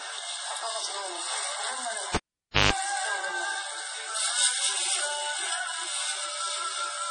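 Throughout, the audio carries heavy codec damage that is likely from MP3 compression at a low bitrate, which fits about 32 kbps. Starved of bits, the encoder dropped weak frequency lines frame by frame and removed everything above 10.5 kHz, giving a watery, swirling texture with smeared attacks.

From 2.15 to 2.73 s, the cable was pulled and plugged in again. A pop opens a gap of about 530 ms of near silence. For about 156 ms of that gap, a 50 Hz mains buzz appears as the plug makes partial contact, and a second pop marks the sound's return.

From 2.51 to 2.55 s there is pre-echo. A sharp attack landed late in a codec block, so quantisation noise meant for the loud part was spread across the quiet stretch before it. About 36 ms of hiss runs ahead of the attack, which sounds softened.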